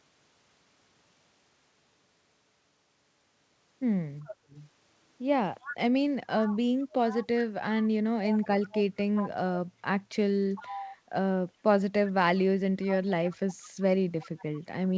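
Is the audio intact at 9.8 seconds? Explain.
No. Background gated by the echo canceller dips the room sound by about 7 dB from 9.70 to 9.82 s, briefly ducking the microphone during playback.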